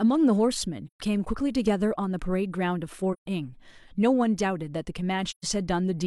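At 0.86–1.00 s, 3.13–3.27 s and 5.30–5.44 s the speech drops into brief silent holes, AAC frame loss with muting. Each gap spans about 128 ms, consistent with three lost frames zeroed by the decoder, with overlapping windows fading the sound out and back in.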